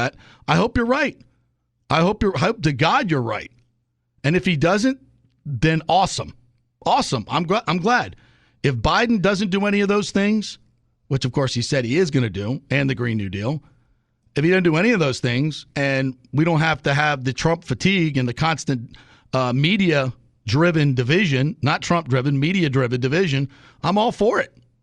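At 5.49 to 5.52 s, between "if he doesn't" and "awesome awesome I'm glad", there is a repeated frames fault: a 20 ms block of the compressed stream plays twice, consistent with a single 20 ms frame. It sounds like a brief stutter, and lengthens the speech by 20 ms.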